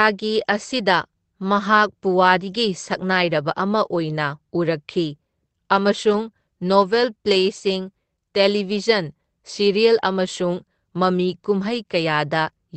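No technical faults occur at any point in this speech, which reaches the listener through a normally working call codec path.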